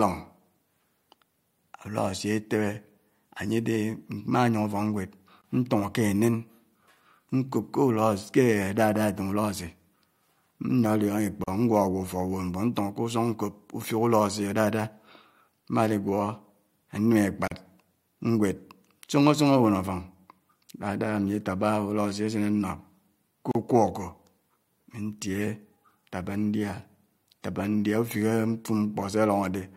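Speech here, and it keeps dropping out briefly every 6 seconds. Gaps at the joins of encoded pieces open at 5.42 s (about 22 ms), then 11.44, 17.48 and 23.51 s (about 37 ms each). The pieces were encoded separately and butted together untrimmed, so encoder start delay and last-frame padding leave slightly smeared silences.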